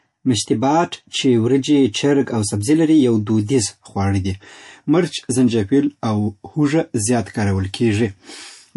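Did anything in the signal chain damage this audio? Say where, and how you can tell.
Yes, at the codec stage, all the way through the speech. The sound has a watery, swirly texture. That's likely MP3 compression starved of bits, which fits a stream of around 48 kbps, so weak frequency lines keep dropping in and out.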